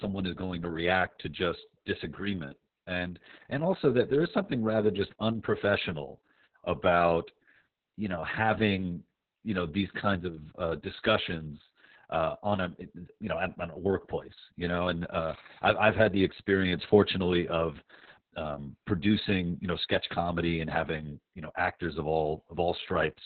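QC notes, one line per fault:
Throughout: Opus voice compression, heavy damage. The speech is muffled, hoarse and faintly robotic, with nothing above about 4.4 kHz, which fits SILK in narrowband mode at a very low rate, around 6 kbps. The linear-prediction coder keeps the rough shape of the vocal tract but codes the excitation coarsely, which roughens the voicing. Frames are long, 60 ms.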